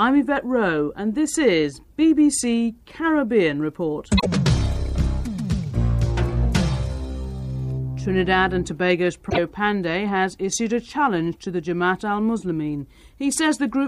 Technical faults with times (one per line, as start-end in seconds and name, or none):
4.17-4.26 damaged data in a compressed stream
9.26-9.38 damaged data in a compressed stream